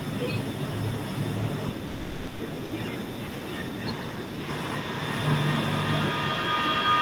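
Sound dropped by the voice detector, at 1.87 to 2.39 s and again at 2.65 to 2.71 s: the speech gives way to steady filler noise for 520 ms and then 60 ms. The likely cause is the sender's voice detector mistaking sound for background and halting transmission.

Feedback howl, from 4.49 s to the end: a tone around 1 kHz builds as the loop repeats about every 0.4 s, reaching about 6 dB above the speech. Two devices in one room are sharing the call, so each trip around the microphone-to-loudspeaker loop adds gain instead of fading.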